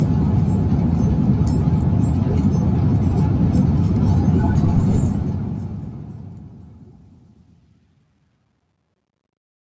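From 4.93 s to the end at 9.73 s, the fade-out shows truncation distortion on a fade, consistent with a gain stage holding about 11 bits without dither. Low-level detail collapses into coarse steps, growing gritty, worst from 6.88 s onward.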